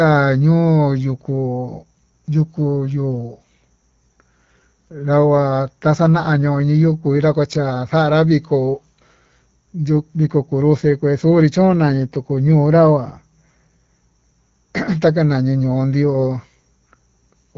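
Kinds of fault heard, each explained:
Nothing stood out on listening to this speech recording, which comes through an HD Voice wideband phone path.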